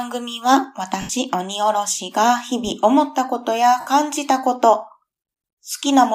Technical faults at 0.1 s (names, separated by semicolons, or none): none